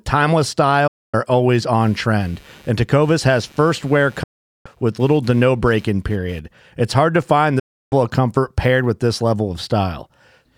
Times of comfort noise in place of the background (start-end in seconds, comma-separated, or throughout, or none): none